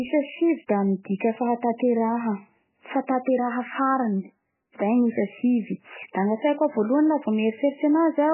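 From start to end, the speech is band-limited with nothing above 3 kHz and sounds watery and swirly, with chirping sibilants and smeared onsets. This is heavy MP3 compression, likely at a bitrate near 8 kbps, starving weak frequency lines so they flicker frame to frame.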